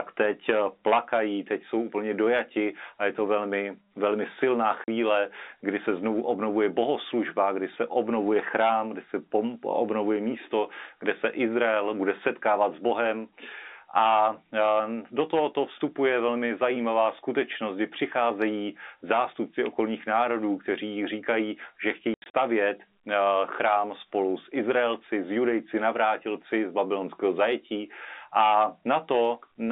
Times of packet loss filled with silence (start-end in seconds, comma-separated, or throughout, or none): 4.84-4.88, 22.14-22.34